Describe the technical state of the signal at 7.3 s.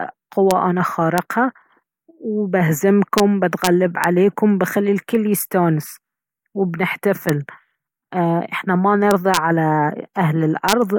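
Integer overflow at 7.29 s: a speech peak just reaches the integer limit and wraps to the opposite sign instead of clipping, producing a single sharp crack.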